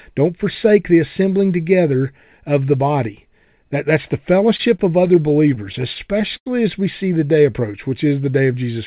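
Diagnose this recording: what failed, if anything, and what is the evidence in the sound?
Repeated stalls (stutter) in the network/jitter-buffer stage, 4.36–6.48 s after "that's the": fourteen brief holds, longest 92 ms, continue the last sound. Nothing is lost, unlike packet-loss dropouts.

Jitter buffer slow-down, 7.26–8.10 s after "as we see the": repeated pitch periods stretch the audio to about 92% speed, adding 76 ms. The pitch stays unchanged, unlike clock-rate drift.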